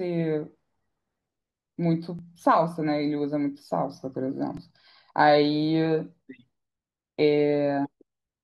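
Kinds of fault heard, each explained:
Repeated buffer: late audio made the device replay its last 2.9 ms piece, fitting a 128-sample buffer; heard as brief clicks, not a dropout's silent gap.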